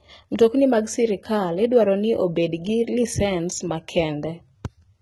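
Throughout the speech, s sounds turn gritty and lispy while the treble stays bright rather than dulled, pointing to heavy HE-AAC compression, likely around 16 kbps.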